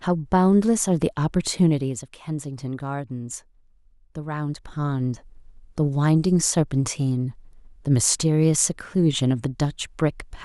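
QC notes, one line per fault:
4.5–5.0 s, zipper noise: While the level shifts by about 10 dB, a fine, rapid ticking rides on the speech, like a zip being pulled. The gain is moving in coarse steps rather than a continuous glide, at around fifty steps a second. Each jump puts a tiny discontinuity in the waveform, so the level change is heard as a string of small clicks instead of a clean ramp.
6.39 s and 9.65 s, dropped samples: Each time brings a single sharp click, too brief to swallow any of the speech, and it would appear as a thin vertical line across the spectrum. The likely cause is a handful of samples missing from the stream, a fraction of a millisecond's worth. The waveform leaps straight from one value to a later one, and that instant step is heard as the click.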